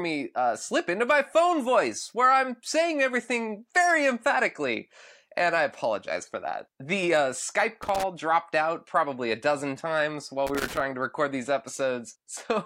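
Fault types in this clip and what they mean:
Loose connector crackle: a worn or dirty contact in the signal path keeps making and breaking, chopping the speech into irregular scratchy bursts. Here it hits from 7.83 to 8.03 s, just before "dropped out probably a", and from 10.47 to 10.80 s, between "a dozen times while" and "to record these".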